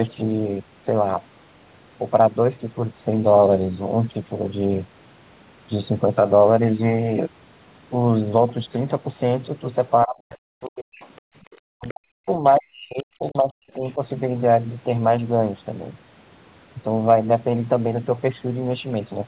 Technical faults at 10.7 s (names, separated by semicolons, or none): speech suppressed in double talk; other side's voice leaking through